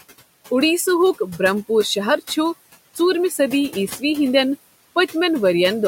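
Noise suppressor artifacts run through the whole speech clip: the processor cuts what it judges steady noise by about 18 dB in each band between phrases, so the room noise, normally sitting about 18 dB under the voice, drops away in pauses and swells back beneath speech. A spectrogram shows a dark, blotchy floor that fills in behind each phrase.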